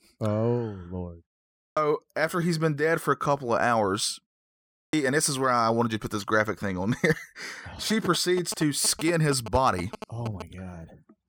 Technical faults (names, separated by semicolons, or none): clipped start after a pause; GSM signalling bursts